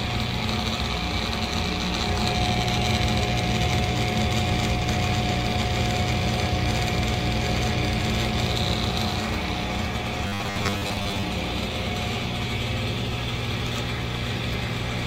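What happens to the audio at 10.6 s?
At 10.6 s you're in the middle of a stretch of robotic sound from repeated short buffers, running from about 10.27 to 11.24 s. It's likely that audio arrived too seldom, so a short chunk kept getting replayed while the real material was skipped. The repeats make up most of what you hear there, laying a rigid, metallic 100 Hz buzz over the sound, which fits a 10 ms buffer.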